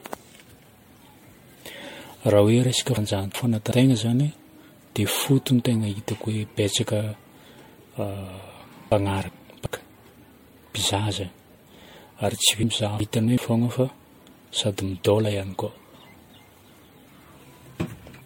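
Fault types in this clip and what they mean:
Generation loss: The audio was most likely decoded and re-encoded as MP3 at 64 kbit/s around five times, each pass stacking fresh quantisation errors. It sounds swirly, hollow and smeared, with blurred attacks and nothing above 16.5 kHz.
Chunks out of order: A block of about 0.37 s was written one chunk late, so it plays after the block that should follow it. This happens at 2.97–3.72 s, 8.92–9.66 s and 12.63–13.38 s, each heard as a jumbled moment.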